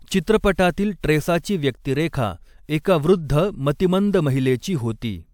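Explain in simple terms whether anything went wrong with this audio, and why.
Nothing went wrong with this audio, because no fault can be heard anywhere in it.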